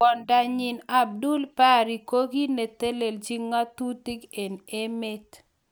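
Speech with no audible faults.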